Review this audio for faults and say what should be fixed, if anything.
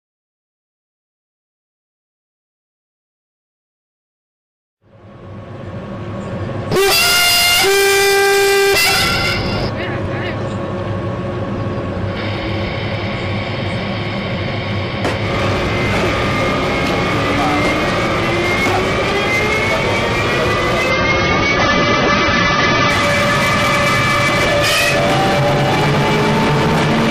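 From 20.90 to 22.90 s the adaptive stream drops to a lower bitrate: the treble vanishes above 6.3 kHz and codec artefacts thicken, without any gap. A spectrogram shows a sudden flat ceiling at 6.3 kHz for those 2 s, which fits a fall to roughly 24 kbit/s AAC. A larger playback buffer, or holding a minimum rendition, would prevent it.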